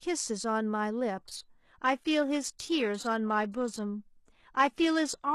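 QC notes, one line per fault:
1.18 s to end: adaptive stream at a lower bitrate. Treble suddenly goes thin and synthetic without a gap, which fits a drop to a low-bitrate HE-AAC version.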